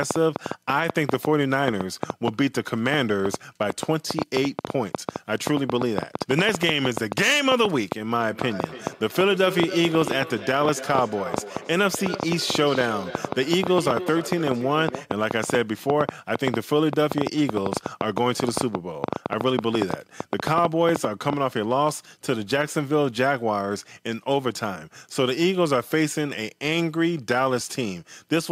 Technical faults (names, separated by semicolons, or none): train of clicks; feedback echo between two devices